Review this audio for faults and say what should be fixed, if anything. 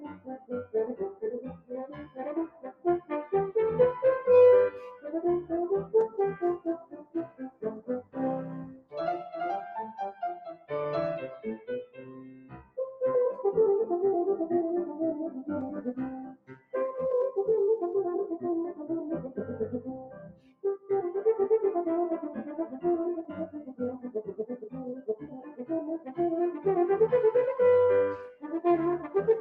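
Noise suppressor applied to music or sounds, throughout: a speech-tuned suppressor treats sustained tones, ambience and tails as noise, so the level swings by around 10 dB and the sound pumps and thins.

Sound cut by the noise suppressor, at 4.74–8.94 s (about 2 s affected in total, dropping by about 19 dB), 16.28–16.74 s (about 18 dB), 20.03–20.89 s (about 17 dB) and 28.28–29.12 s (about 17 dB). In each case the suppressor pulled steady or decaying sound down while sudden onsets passed.

To prevent this, disable noise suppression, or switch it to a music mode, whenever the source is not speech.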